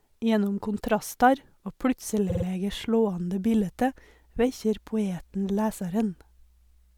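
From 2.03 s to the end, a steady 60 Hz mains hum sits roughly 35 dB under the speech, likely a ground loop or nearby transformer leaking power-line tone in. At 2.29 s, repeated frames cause a quick stutter: a 52.2 ms chunk, which fits a couple of compressed frames, plays three extra times, adding 156.7 ms.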